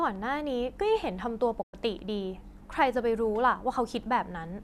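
At 1.61 s the speech fades out over about 20 ms and stays silent until 1.75 s. This is a digital broadcast dropout: the receiver stopped getting usable frames, either through signal loss or checksum failures, and muted its output rather than play corrupted data. Roughly 96 ms of programme is missing, which points to about four lost frames. The speech resumes mid-flow, with nothing from the gap recoverable.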